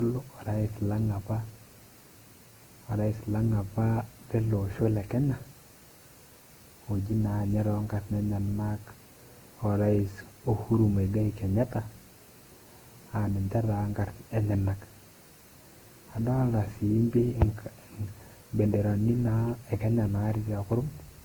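Speech runs the full length of the recording with generation loss throughout: a swirly, smeared, hollow texture and softened consonant attacks, more degraded than one encode at its rate would account for. Content still reaches about 20.1 kHz, so bandwidth is not the problem. The likely cause is repeated decoding and re-encoding, roughly seven passes, in a codec chain that points to Opus at around 48 kbit/s. Each pass adds quantisation noise on a shifted frame grid.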